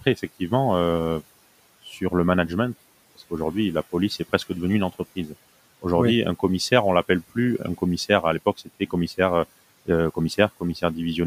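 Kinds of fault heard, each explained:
Speech cut by the noise suppressor: between 8.57 and 8.93 s, quiet speech mistaken for noise sinks about 11 dB, sounding swallowed rather than fully silent like a dropout.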